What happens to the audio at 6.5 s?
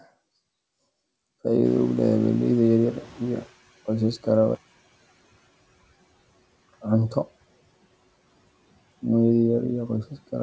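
At 6.5 s the speech is emerging from a drop that begins after "qoysaska raba" and runs 4.55 to 6.53 s. The level falls by about 33 dB, leaving a faint residue, likely one channel inverted cancelling its twin in the mono sum. The waveform shrinks nearly flat and the spectrogram fades until 6.53 s.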